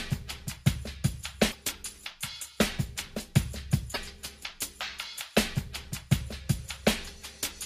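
Damaged data in a compressed stream appears twice, from 1.48 to 1.55 s and again from 3.91 to 3.98 s, each lasting about 70 ms. At both points part of the encoded stream is wrong, so the decoder misreads or rejects those frames, loses sync and hunts for the next valid frame header. Each break comes through as a chirp, squawk, click or short hole.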